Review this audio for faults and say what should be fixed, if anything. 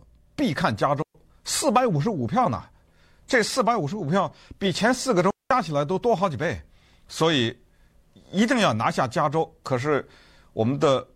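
Two digital wireless dropouts break up the speech, at 1.02 to 1.15 s (about 125 ms) and at 5.30 to 5.51 s (about 200 ms). Each is a clean hole of near silence with a very quick fade in and out and no noise burst on either side. That is the receiver muting when the digital link loses more data than it can conceal, rather than an analogue squelch. To prevent it, keep line of sight between transmitter and receiver, shorten the distance, and move off congested RF channels.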